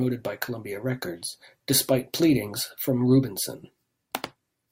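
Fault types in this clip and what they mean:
No technical faults can be heard anywhere in the speech recording, with the signal staying continuous and steady throughout.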